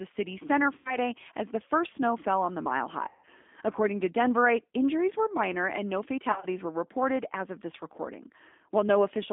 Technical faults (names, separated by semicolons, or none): G.729 codec; VoIP packet loss concealed by the speech codec